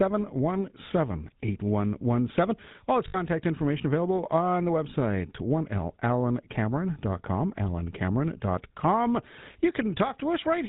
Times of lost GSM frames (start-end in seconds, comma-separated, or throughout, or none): 3.08-3.17